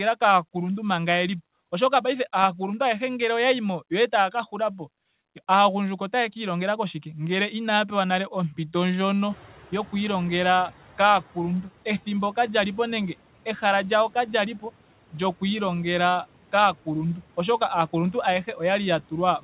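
From 9.3 to 10.75 s the noise suppressor is catching up. Room noise jumps sharply around 9.5 s, and the suppressor's noise estimate lags, letting the noise through with less reduction at first before it sinks by about 8 dB over 1.45 s. On a spectrogram the noise floor brightens suddenly, then fades gradually. The waveform's quiet gaps thicken, then thin. The spectrum is bare above 4 kHz throughout, which fits the G.711 mu-law call codec.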